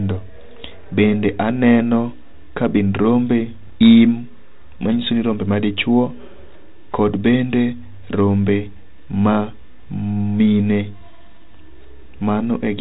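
From 3.63 to 3.73 s, the speech is hit by bit errors on an ADPCM link. A low error rate, around a fifth of a percent, flips bits in the coded stream. Each flip also throws off the decoder's step size and predictor, so the damage rings on for milliseconds. It sounds like pops with a brief rough, level-jumping burst. On the waveform, spiky steps and sudden amplitude swings appear. The spectrogram shows broadband vertical streaks, all capped below 4 kHz, which fits a 32 kbit/s G.726 link.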